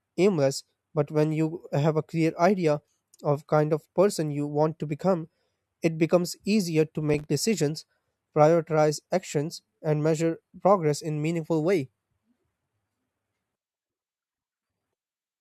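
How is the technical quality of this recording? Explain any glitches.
The recording has one audible glitch. From 7.10 to 7.26 s, between "it becomes easier to" and "decisions prioritize actions and", there is processor overload crackle. The processor missed several consecutive buffer deadlines of a few milliseconds each, leaving short hard-edged silent gaps that merge into gritty tearing. Unlike a single network dropout, it is a cluster of tiny clicks, not one clean hole.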